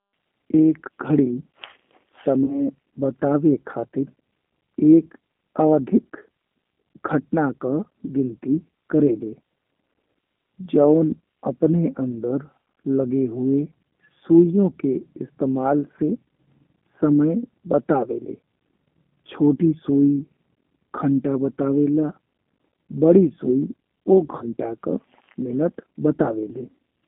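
Throughout the speech there is a rough, slightly synthetic narrowness, confined to about 250 Hz to 3.5 kHz. This is the G.729 codec, which fits an 8 kbit/s stream rebuilding the sound from filter and pulse models. At 2.44–2.61 s, 15.96–16.00 s and 24.38–24.44 s, just before "का मिनट", the sound smears into a buzzy tone or coloured noise that fades. This is VoIP packet loss concealed by the speech codec, which extrapolated the last pitch through roughly 40, 20 and 30 ms gaps.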